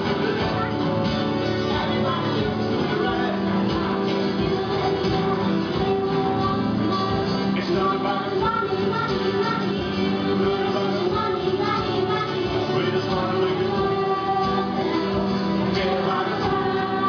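Nothing goes wrong anywhere in the clip; there's no technical fault to point to at any moment.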